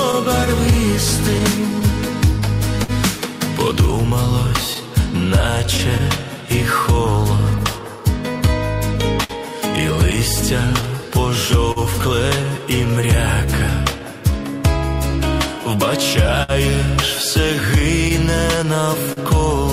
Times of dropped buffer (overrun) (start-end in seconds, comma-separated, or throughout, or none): none